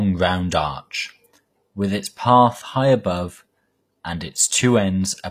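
From start to finish the speech has gritty, metallic s sounds and a treble that doesn't quite belong to the voice, with nothing above 15 kHz. That's likely HE-AAC compression, rebuilding the top by copying lower bands upward, which fits a bitrate around 24 kbps.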